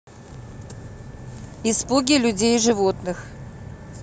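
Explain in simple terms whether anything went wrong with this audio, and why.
Nothing went wrong with this audio: the speech comes through with no fault to be heard anywhere in it.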